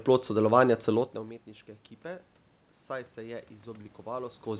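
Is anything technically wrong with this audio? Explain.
Yes, there are two faults. Automatic gain rising starts at 3.15 s and continues to the end: the input dropped by about 18 dB, so the gain control slowly turned its gain back up. The sound and the room noise swell together over more than a second, separate from the talker's own movement near 4.5 s.

Short concealed packet loss occurs from 3.82 to 3.89 s: about 20 ms of audio never arrived in time. The receiver bridged the hole by extending the preceding sound for roughly 27 ms, then blended back into the real signal, leaving a brief smeared, wobbly patch.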